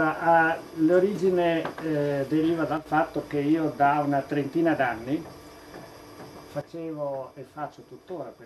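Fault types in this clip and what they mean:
Sudden gain jump: the level drops abruptly by about 7 dB from 2.77 to 2.86 s, then by about 10 dB from 6.61 s to the end. The background noise drops with it, in a single step rather than a fade or compressor pumping, likely from gain applied without a ramp.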